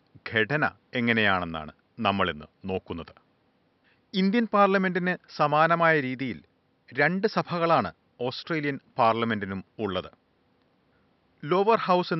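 A speech recording with nothing technically wrong with it; the faint room noise sits about 43 dB below the speech.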